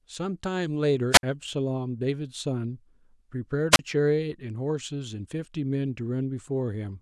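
Speech with two wireless microphone squelch dropouts, at 1.11–1.23 s and 3.71–3.79 s. A fading radio signal triggers the receiver's squelch. Hiss rises, then silence lasts about 60 ms and 33 ms.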